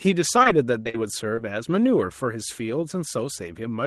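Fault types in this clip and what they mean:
Short concealed packet loss: four brief gaps of roughly 20 to 40 ms were patched by extending the preceding speech, heard as short smears or wobbles.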